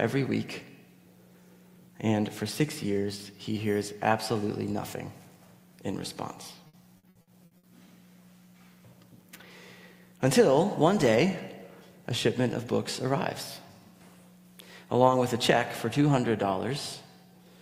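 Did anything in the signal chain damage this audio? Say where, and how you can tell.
Yes. Between 6.67 and 7.66 s the network stage damaged the sound with repeated packet loss, which gives it a choppy, robotic character. In that second there are six dropouts, the longest 60 ms, and about 360 ms in total is patched over, roughly a third of the stretch. The receiver filled each hole by extending the last sound it had, so on a spectrogram the harmonics flatten into short frozen horizontal bands, and the waveform shows repeated copied cycles.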